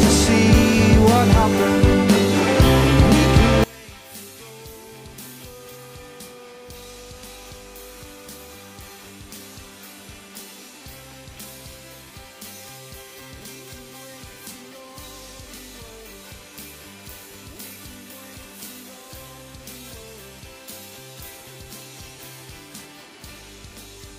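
At 3.64 s the sound collapses to about 27 dB below its earlier level and stays there to the end. The likely cause is one channel inverted: with one stereo side's polarity reversed, folding to mono cancels whatever both sides share, leaving only their small differences. Unlike a dropout or mute, the sound doesn't stop, and unlike a plain gain drop, what survives is a residue rather than a quieter copy of the full mix.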